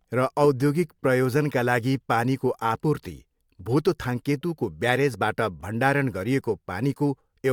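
There are no technical faults to describe in the recording.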